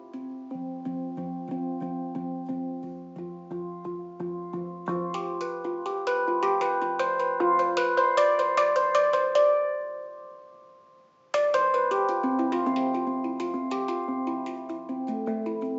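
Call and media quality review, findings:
Nothing stood out on listening; no findings to raise for this clip.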